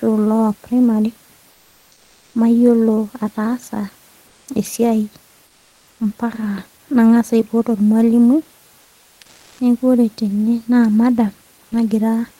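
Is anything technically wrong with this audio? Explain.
Yes. In three pauses, from 1.51 to 2.33 s, 4.27 to 4.47 s and 5.47 to 5.99 s, the room noise, which sits about 36 dB below the speech, gives way to comfort noise in place of the background. It is a smooth, featureless hiss, about 2, 1 and 4 dB quieter respectively. The likely cause is discontinuous transmission, as in Opus DTX: the sender goes silent when it detects no speech, and the receiver synthesises roughly matched noise. A spectrogram shows flat, textureless bands with level steps at each boundary.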